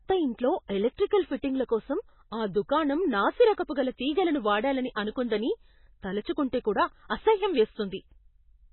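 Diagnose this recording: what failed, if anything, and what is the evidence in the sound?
The speech is band-limited throughout, with nothing above 4 kHz, and has a heavy watery, swirly texture. That points to the codec stage, likely MP3 compression starved of bits, which fits a bitrate around 16 kbps. The encoder cuts the treble and drops weak spectral lines frame to frame.

Pre-echo appears at 0.68 s and at 4.95 s, the second between "గల తీగలను వాడాలని" and "అనుకుందని తలుచుకుంటే కూడా". A short hiss of about 15 to 16 ms leads each sharp onset. The codec spread quantisation noise across the transform block, into the quiet just before the attack.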